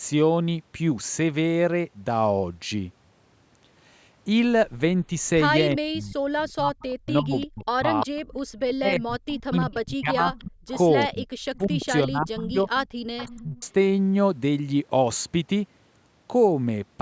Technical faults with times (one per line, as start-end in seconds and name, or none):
5.09-13.64 speech suppressed in double talk
6.80-13.66 echo leak
8.47-8.53 background gated by the echo canceller